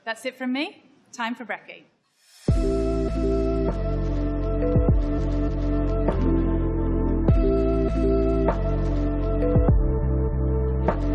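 No technical faults can be heard anywhere in the audio.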